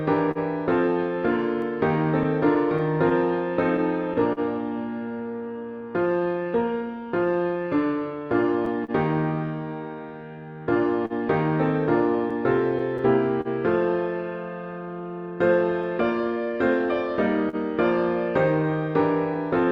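The audio runs through a call path whose band limit near 8 kHz fits Opus at about 32 kbps. It carries clock drift between sender and receiver for its whole length: the sending clock runs roughly 3% slow, so the receiver's buffer keeps draining and must be topped up. Unlike a single glitch or a steady speed change, the hiccups keep returning at uneven intervals from start to finish.

That drift produces repeated timing corrections from 1.88 s to 19.66 s. The receiver repeatedly stretches the sound by reusing short pieces, adding about 200 ms in all, which works out to playback near 99% speed. These edits all lengthen rather than shorten. They are faint and spread out, so they come across as a slightly unsteady tempo rather than distinct dropouts.

Scattered short gaps sit in three stretches. About seven fall between 0.31 s and 4.40 s, about three between 7.91 s and 8.91 s, and about seven between 11.06 s and 17.56 s. 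None is longer than roughly 40 ms. The receiver covers each by extending the preceding sound, so you hear brief smears or ticks. These differ from the drift corrections because they come from late or lost packets within limited stretches instead of being spread unevenly through the whole clip.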